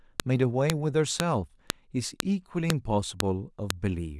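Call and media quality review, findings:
File header played as audio: sharp, loud clicks at 0.20, 0.70, 1.20, 1.70, 2.20, 2.70, 3.20 and 3.70 s, one every 0.5 s regardless of the speech. Probable component: the stream assembler joining 0.5 s WAV pieces. Mechanism: each piece's header bytes are passed through and decoded as samples, so every join produces a brief burst of arbitrary values. Fix: strip the headers before concatenating or streaming.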